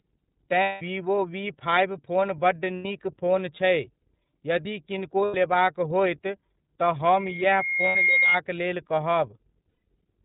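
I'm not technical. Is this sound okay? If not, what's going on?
No, there are three problems.

The whole recording has passed through the iLBC codec, a phone-call compression system that strips out everything above 4 kHz. That is why the speech sounds muffled, slightly rough and a little artificial all the way through. This is a steady, constant quality, unlike the brief dropouts below, which come and go. It is the kind of sound you would expect from an internet phone call.

There are also lost iLBC frames, short moments where pieces of the call never arrived. They occur at 0.63 s (about 180 ms), 2.77 s (90 ms), 5.25 s (90 ms), 7.89 s (60 ms) and 9.69 s (180 ms). Instead of silence, the decoder fills each gap by stretching the last bit of sound into a held, slightly buzzy or breathy tone. The speech then snaps back to normal almost immediately, rather than staying garbled the way a worse connection might.

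From 7.04 s to 8.38 s there is a loudspeaker feedback squeal. A microphone picked up its own loudspeaker and the sound looped around, growing each time. You hear a single high whistle at about 2.2 kHz that swells over roughly a second until it is louder than the speech. What separates it from electrical hum or a test tone is that it builds up on its own instead of starting at full strength.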